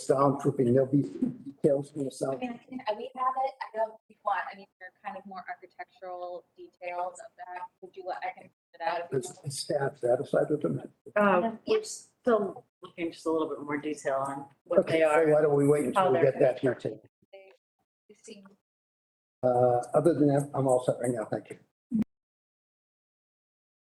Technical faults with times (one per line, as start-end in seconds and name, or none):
22.02-23.93 cut-off end